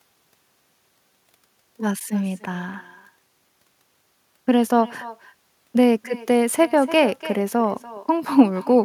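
Throughout the recording, the far end's loudspeaker feeds back into its microphone with nothing to cancel it, a case of echo with no canceller. Every phrase returns roughly a third of a second later as a thinner copy, about 19 dB quieter than the speech.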